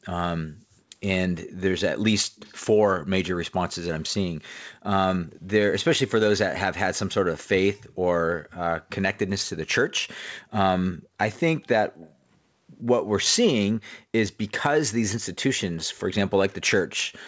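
From 0.52 to 0.64 s the room sound is background gated by the echo canceller: it dips about 25 dB for roughly a tenth of a second, then returns. That is a loss of background, not an added sound. At 2.36 to 2.57 s, 7.88 to 7.93 s and 12.05 to 12.10 s a faint copy of the speech trails it by 120 ms, about 30 to 35 dB down. This is likely an echo leak from a loudspeaker side, and the fixed delay separates it from room reverberation.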